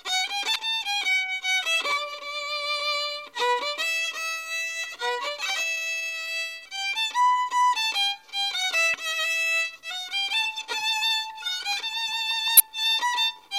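Three brief bursts of damaged data in a compressed stream break up the audio at about 0.53–0.56 s, 8.91–8.94 s and 12.57–12.60 s, each lasting roughly 35 ms. At these points corrupted bytes make the decoder misread frames and lose sync until it finds a valid header, producing a short chirp or squawk. On a spectrogram each shows as a narrow vertical smear of broadband energy, and the waveform shows an abrupt discontinuity.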